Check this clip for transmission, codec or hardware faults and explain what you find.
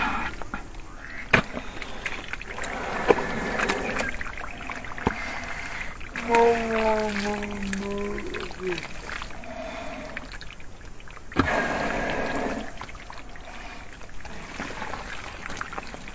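One fault runs through the whole clip: a wrong sample rate. The audio is being clocked out at half the rate it was captured at, with no conversion, which fits material recorded at 32 kHz being played at 16 kHz. Because each sample now lasts twice as long, everything slows to 0.5 times normal speed and drops a full octave, 12 semitones, in pitch. The sound comes across low, slow and heavy from start to finish.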